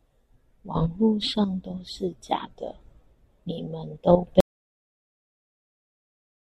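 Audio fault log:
4.40 s to end: audio dropout to silence. Right after "你們都" the speech cuts out to silence with no room tone left, likely from a lost input while recording carried on.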